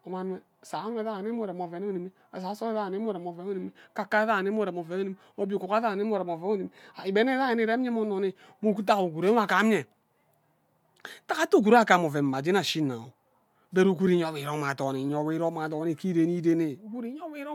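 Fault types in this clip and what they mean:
Nothing stood out on listening; the speech comes through without any audible problem.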